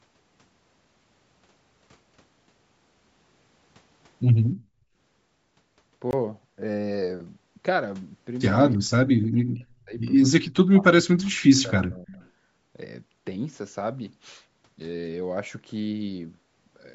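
At 6.11 to 6.13 s a block of digital silence cuts the speech for 20 ms. The signal drops straight to silence and returns with no fade, and comes across as a short hole in the speech. This points to the output buffer not being filled in time for that block, with zeros going out in its place.

At 8.73 to 8.78 s a faint copy of earlier speech arrives 311 ms late, sitting very far below the main voice, around 35 dB down. This is likely an echo leak: the far side's loudspeaker sound reached its microphone and the echo canceller let a residue through. It returns at 12.13 to 12.28 s with the same 311 ms delay, a little stronger at roughly 30 dB below the speech.

Between the two echo scraps, from 8.77 to 9.95 s and again from 10.4 to 12.12 s, the talker's level repeatedly sags and breaks up, with the deepest dips reaching something like 40 dB and about a second affected in each stretch. This is likely speech suppressed in double talk. 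With both ends active, the canceller could not tell the local voice from the echo and attenuated everything. The band stops at 8 kHz, consistent with the call's microphone processing.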